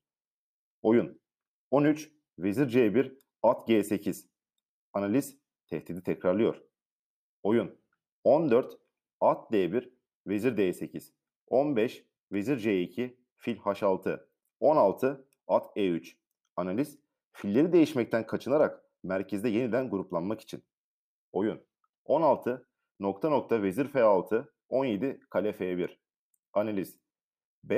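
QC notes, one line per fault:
Speech checked end to end, no faults heard, nothing to log.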